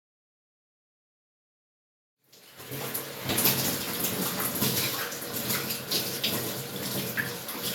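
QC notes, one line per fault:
Nothing to flag here; the sound just eases in gently from around 2 seconds and reaches full level by 3.6 s, with no click or hard edge.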